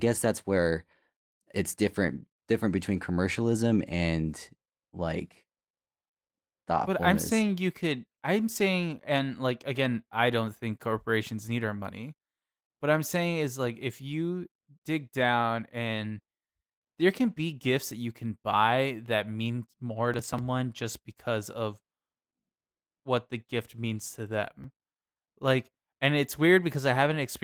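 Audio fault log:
20.14–20.39 s and 24.64–24.87 s, processor overload crackle: the processor fell behind on its audio buffers and missed several deadlines in a row, about five at a time, which fits buffers of around 10 ms. Each missed buffer was dropped rather than repeated, so the speech breaks into short hard-edged gaps, heard as a quarter-second burst of gritty crackle right after "buy that mean more" (ending before "just because of") and again after "the gift means to".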